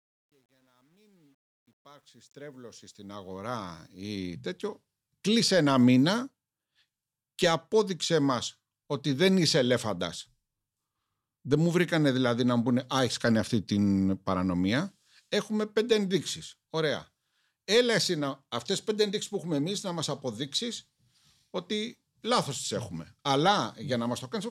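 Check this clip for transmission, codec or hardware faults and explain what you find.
One fault is present, at the start of the speech. From 0.0 to 4.14 s, just before "τέτοιο κλείσε ένα μήνα", there is truncation distortion on a fade. The fade-in's gain stage drops low-order bits without dither, consistent with about 10-bit resolution, so the quietest part collapses into coarse square steps. Up to about 2.7 s the sound is gritty.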